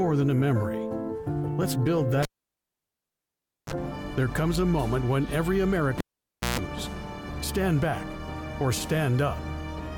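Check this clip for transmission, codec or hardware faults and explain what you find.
Two hardware faults, both a cable pulled and plugged in. At 2.23 to 3.73 s a live lead is yanked: a pop, about 1.45 s of near silence, then a brief 33 ms burst of 50 Hz mains buzz as only the tip touches, and a second pop as sound returns. At 5.98 to 6.59 s it repeats with a 0.56 s dropout and a longer 140 ms buzz at 60 Hz. On a waveform, each shows spikes bracketing a flat gap. On a spectrogram, the pops are vertical broadband lines and the buzz is horizontal harmonic stripes.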